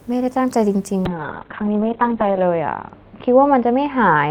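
At 1.07 s a call bitrate drop sets in, falling from 32 to 6 kbps. Bandwidth shrinks from 20 kHz to 4 kHz. The speech turns muffled and rough to the end.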